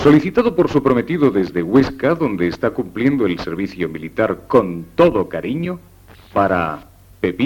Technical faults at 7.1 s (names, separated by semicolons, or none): none